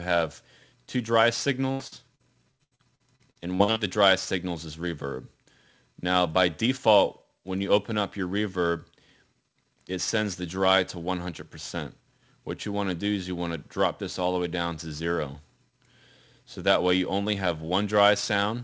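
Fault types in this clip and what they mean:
Repeated packet loss (robotic sound): From 1.72 to 3.79 s the stream keeps dropping pieces, about a dozen holes adding up to roughly 600 ms, the longest 80 ms, each filled by stretching the preceding sound. Nearly a third of the stretch is synthetic, so it turns choppy, with pieces missing. A spectrogram shows smeared, repeated frames with flattened harmonics, capped at 8 kHz like the rest of the call path. The waveform shows short, periodic-looking repeats and abrupt joins.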